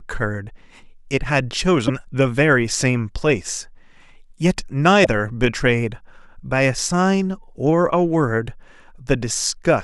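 A broken MP3 bit reservoir is the likely cause of two short glitches in this speech, at 1.87 s to 1.90 s and again at 5.03 s to 5.06 s. Where frames went missing, the next frame reached back for borrowed data and found bytes from the wrong frame, so the decoder produced garbage. Each time, about 30 ms of the sound is disrupted and the speech jumps ahead, a span of roughly one 26 ms MP3 frame.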